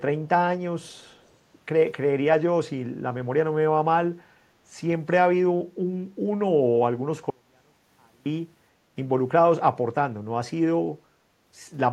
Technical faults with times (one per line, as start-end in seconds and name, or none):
0.87-1.31 echo leak
7.30-8.26 audio dropout to a faint residue